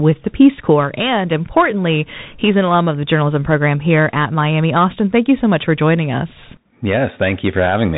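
Throughout, the speech stops at 4 kHz, with scratchy s sounds and granular hiss: plainly audible damage from a Bluetooth CVSD headset codec's one-bit steps, fitting 64 kbps.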